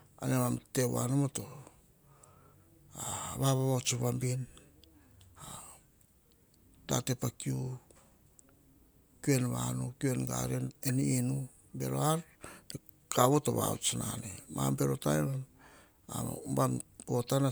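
Speech recording with no audible technical faults.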